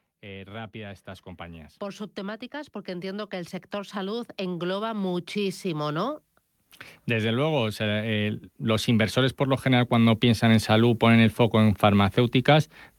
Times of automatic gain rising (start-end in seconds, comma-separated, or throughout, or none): 0.21-6.27, 7.07-10.69